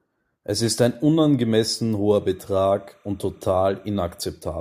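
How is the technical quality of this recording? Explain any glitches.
One glitch stands out in the speech. From 2.21 to 4.21 s, just after "ist ein unangemessen", a faint, steady chirping warble runs behind the sound at about -40 dB. This is timecode bleed: linear timecode, consistent with 30 frames-per-second code, has leaked in from a neighbouring track or cable, toggling between tones near 1 kHz and 2 kHz.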